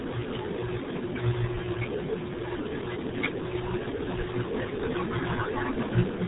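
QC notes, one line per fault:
Throughout, RealAudio 14.4 codec: nothing above 3.8 kHz survives, and heavy low-bitrate coding, which fits about 8 kbit/s, leaves the speech muffled and gargly.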